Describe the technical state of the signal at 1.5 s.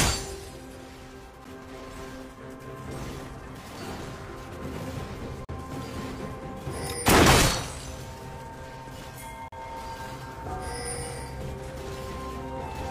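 Just before 1.5 s, at 1.44 s, the sound drops out for about 10 ms, a brief hard-edged hole of silence. This is a gap between stream segments: the timestamps where 4-second segments meet leave a small space, which the player fills with silence, though no audio is lost.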